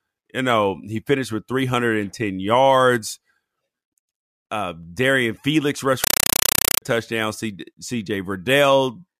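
From 6.04 to 6.82 s, a compressed stream is played as audio: an AC-3 bitstream reaches the output undecoded and is treated as ordinary samples. Each frame becomes a 5.33 ms burst of noise and then silence, 31.25 times a second, so the speech gives way to very loud, chattering static.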